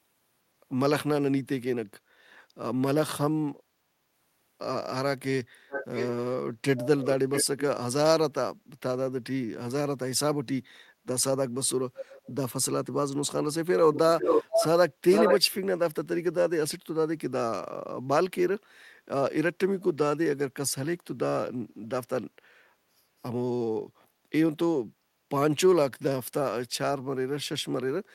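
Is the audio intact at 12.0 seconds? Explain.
No. From 11.96 to 12.35 s a faint copy of the speech trails the original by 622 ms, about 15 dB quieter. This is an echo leak, likely a loudspeaker's echo canceller letting microphone pickup return down the line.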